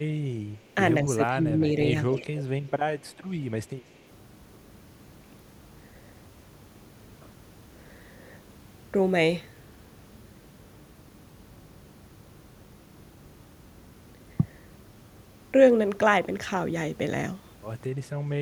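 Speech suppressed in double talk, 1.05 to 1.79 s: the speech dips by about 10 dB for roughly half a second, likely an echo canceller turning down both its own talker and the loudspeaker echo during overlapping talk.

Echo leak, 2.12 to 2.41 s and 2.67 to 2.71 s: a copy of the speech returns 233 ms late, first about 10 dB down, then a much fainter scrap. This is likely loudspeaker pickup that the canceller missed.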